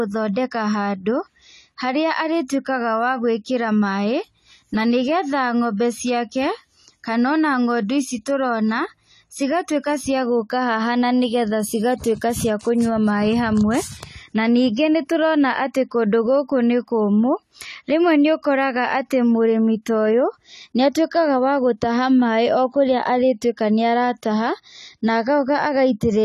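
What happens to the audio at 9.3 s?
At 9.3 s the speech carries AAC compression damage that runs through the whole clip: dull, smeared sibilants with a warbling fizz. It is likely from AAC-LC at a low bitrate, around 32 kbps. A spectrogram shows nothing above 14 kHz.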